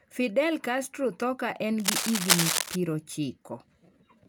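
From 1.80 to 2.76 s, just after "tho ka en", cable scratch noise rides over the speech: a dense, uneven rustling and scratching roughly as loud as the speech itself. The likely cause is a worn cable or connector being moved, its contact resistance flickering so that bursts of noise leak into the signal. Unlike vinyl-style crackle or isolated clicks, the bursts come in a continuous, irregular cluster lasting close to a second, then stop.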